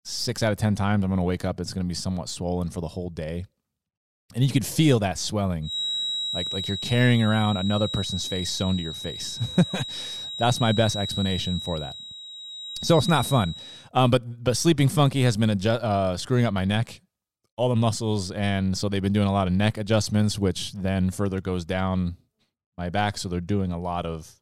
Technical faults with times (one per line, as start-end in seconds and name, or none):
5.60-13.91 feedback whistle